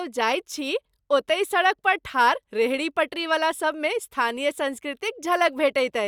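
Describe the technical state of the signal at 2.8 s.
The signal at 2.8 s is intact, with no audible fault at that point in the speech.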